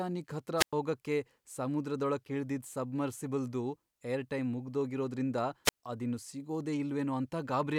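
From 0.57 to 0.73 s, just before "ಹೋಗಕ್ಕೆ ಸಮುದ್ರದೊಳಕ್ ಇಳ್ದಿದ್ ಸಬ್ಮರ್ಸಿಬಲ್ದು", and again from 5.65 to 5.77 s, between "ಇಳ್ದಿದ್ ಸಬ್ಮರ್ಸಿಬಲ್ದು ಏರ್ಟೈಮ್ ಮುಗ್ದೋಗಿರೋದ್ರಿಂದ" and "ಅದಿನ್ನು ಸಿಗೋದೇ", a wireless microphone squelch dropout occurs. The fading radio signal first swells into hiss, then the receiver mutes for about 103 ms and 82 ms respectively. That rising static ahead of the silence separates it from a clean digital packet-loss gap.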